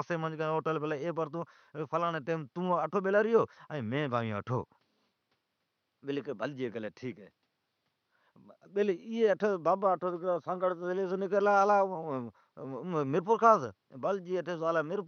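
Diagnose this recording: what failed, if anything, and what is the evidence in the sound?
Nothing failed in this recording.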